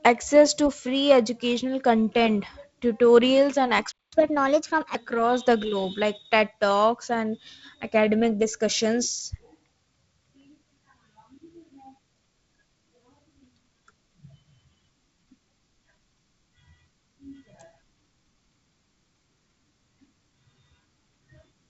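A playback stall at 3.92 to 4.12 s cuts the speech dead for about 210 ms after "educational content tutorials and", likely because the player ran short of buffered data. Catch-up at higher speed follows from 4.12 to 4.95 s: the backlog plays at 1.25 times normal rate, lifting pitch by roughly four semitones before settling back.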